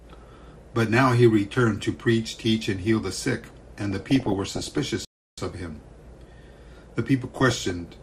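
The audio carries MP2 compression damage from start to finish. It sounds dull and lacks top end. A granular, gurgling texture sits on everything. The damage is plainly audible. The likely cause is MPEG Layer II coding at a low rate, and the sound fits roughly 80 kbps. At that rate the encoder cannot fund all of its 32 sub-bands. Upper bands drop out, and the rest are quantised coarsely. DAB burbling breaks in twice, from 3.91 to 4.78 s and from 7.31 to 7.80 s. Both stretches put short blips of noise into the sound. Bit errors slipped past error correction into the MP2 data, at a rate of roughly 0.5 and 0.4 percent. Corrupt samples put blips of noise into single sub-bands, and corrupt scale factors make sub-bands jump in level. Many frames are hit each time. The second burst is shorter. A playback stall cuts the sound dead from 5.05 to 5.38 s. The gap lasts about 0.33 s. Then the audio carries on. 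The likely cause is a player that ran out of buffered data, or one whose output thread was briefly blocked. Either way, nothing reached the output until it recovered.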